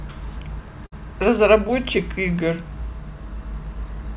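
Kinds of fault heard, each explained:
Burst of packet loss: at about 0.86 s the speech briefly turns into a stretched, fading copy of the sound just before it, lasting roughly 58 ms. It then resumes at 0.94 s with about 60 ms of the speech skipped over. Packets in a row arrived too late or not at all, so the receiver filled the gap by extending the last good audio and turning it down until real audio returned.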